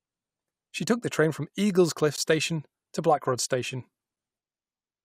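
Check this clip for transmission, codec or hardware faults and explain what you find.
One fault is present in this speech clip. At 2.16 s a brief hole of about 14.5 ms cuts into the sound, with abrupt edges on both sides. This is a gap between stream segments: the time stamps of consecutive 2.0 s segments fail to meet, so the player fills the missing span with silence. Nothing is actually lost from the audio.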